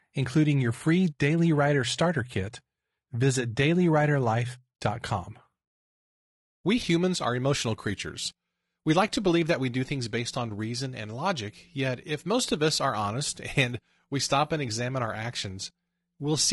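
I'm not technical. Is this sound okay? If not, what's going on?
No. Throughout, the speech sounds rough and grainy, with hiss woven between the voice's tones and a thin, artificial top end. This is likely low-delay AAC compression, as in video calls. Unlike background noise, the grit follows the voice and vanishes in pauses.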